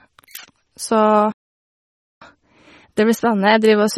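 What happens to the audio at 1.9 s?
The speech drops out completely from 1.32 s to 2.22 s, a gap of about 0.89 s, then carries on. This is a playback stall, most likely the player running out of data or being blocked, so output went silent until it recovered.

Around that gap the speech sounds watery and swirly, with metallic edges on s sounds, smeared onsets and nothing above 18.2 kHz. This is MP3 compression damage from bit starvation, which fits a low bitrate of about 32 kbps. The encoder drops weak frequency lines, which then flicker on and off between frames.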